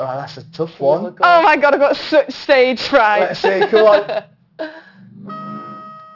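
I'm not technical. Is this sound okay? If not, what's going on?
No. There is aliasing throughout the whole clip. The sound was converted to a lower quality without first removing its highest sounds. Everything above about 6 kHz folds back down as false, unrelated tones, making hissy and bright parts sound gritty and metallic.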